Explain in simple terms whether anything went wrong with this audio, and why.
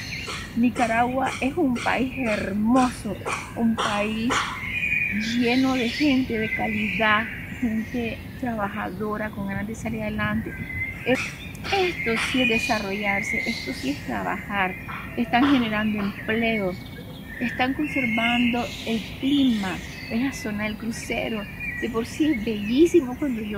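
Nothing went wrong with this audio, as no fault can be heard anywhere in it. There are no breaks, glitches or sudden changes that would point to a problem.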